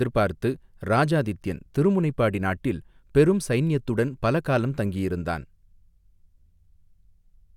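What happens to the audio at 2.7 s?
Nothing goes wrong at 2.7 s: the speech runs on intact there, with no dropout, click, glitch or other fault at that moment.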